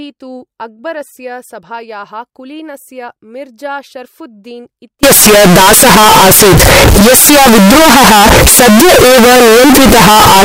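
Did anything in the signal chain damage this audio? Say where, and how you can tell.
Yes. From 5.03 s to the end at 10.45 s, right after "कुलीनस्य मिर्जा शर्ऴुद्दीन्", the speech turns into a float read as integer fault at the sample-format conversion stage. The sound jumps to a harsh, very loud, nearly square waveform sitting at an almost fixed, high level, and background noise becomes as loud as the speech, though the pitch can still be followed. This is likely 32-bit float data being read as 32-bit integers, so each sample's sign and exponent bits set its level instead of the actual waveform.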